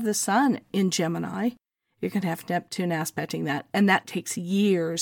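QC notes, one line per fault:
No faults heard in this speech recording; nothing to log.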